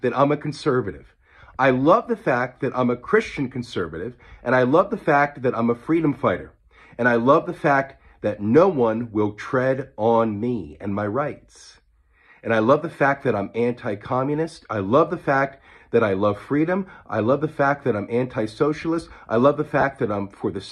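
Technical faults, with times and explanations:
19.81–19.83 s: lost LE Audio frames. About 20 ms is missing, consistent with two lost frames. The decoder repeats the last spectrum with random signs, leaving a brief noisy smear.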